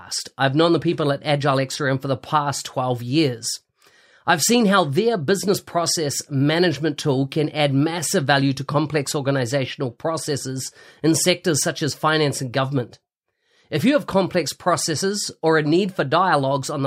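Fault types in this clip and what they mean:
No technical faults can be heard in the speech recording: the signal stays continuous and stable, with no audible disturbance to its level, timing or frequency content.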